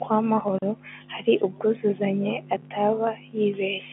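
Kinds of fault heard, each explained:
Kinds of fault heard: none; the speech carries the normal telephone band, with nothing above 3.8 kHz.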